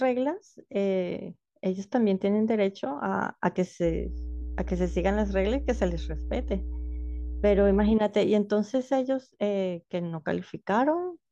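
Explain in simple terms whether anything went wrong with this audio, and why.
From 3.84 to 7.97 s, mains hum adds a loud, steady 60 Hz tone from power wiring, a constant even pitch unlike irregular, shifting rumble.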